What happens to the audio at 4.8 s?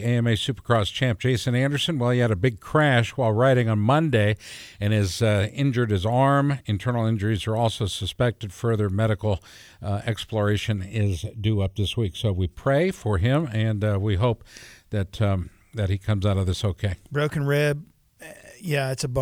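Nothing goes wrong at 4.8 s; the speech runs on intact through that moment, with no dropout, click, glitch or other fault.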